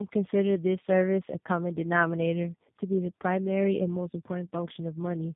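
This is a short speech clip with tandem speech coding running the whole way through. It sounds like the signal went through about three separate speech codecs in a row, each re-encoding the previous one's already mangled output, so the errors stack up. You get a rough, muffled, warbly texture, with nothing above 3.6 kHz. That fits a chain ending in an 8 kbit/s coder such as G.729A.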